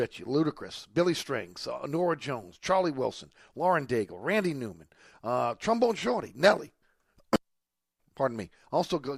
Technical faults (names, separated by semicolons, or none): none